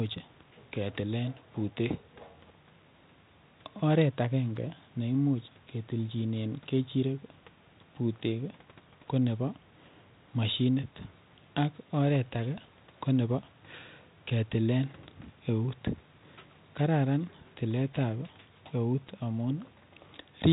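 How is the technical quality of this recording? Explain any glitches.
No glitches: the speech is band-limited to telephone width with nothing above 4 kHz and carries only a faint coding grain, which fits a 32 kbit/s G.726 ADPCM path working as intended.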